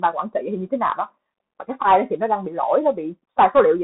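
Throughout, the Bluetooth CVSD headset codec limits the speech. Nothing passes above 4 kHz. The one-bit step coder scratches sibilants and leaves a granular hiss underneath.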